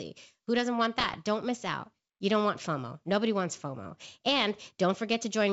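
Right after "doesn't want", from 0.98 to 1.17 s, the speech breaks into pops and a rough, gritty burst with brief jumps in level. These are bit errors on an ADPCM link, at roughly one percent. Each flipped bit throws off the G.722 decoder's step size and prediction, so the damage rings on for a few milliseconds.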